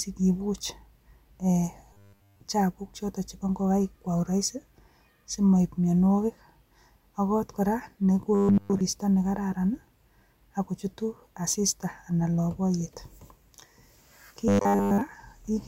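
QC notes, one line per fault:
1.93 to 2.40 s, 8.35 to 8.81 s (just after "ak kot kora") and 14.48 to 15.01 s, robotic sound from repeated short buffers: the voice collapses into a stiff metallic buzz at 100 Hz that only loosely tracks the words. That pitch fits a 10 ms chunk being looped in place of fresh audio, likely because the buffers ran dry. The first and last stretches are almost entirely repeats; the middle one is mostly repeats.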